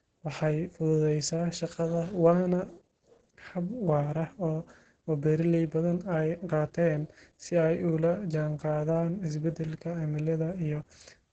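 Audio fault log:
Throughout: Opus voice compression. The speech sounds muffled, hoarse and faintly robotic, with heavy coding damage, which points to the SILK linear-prediction coder working at around 10 kbps. The band stops sharply at 8.9 kHz, and the coarse excitation coding roughens the voicing. On a spectrogram there is a flat ceiling at 8.9 kHz with nothing above it, and harmonics look blurred and patchy in blocks that fit 20 ms frames.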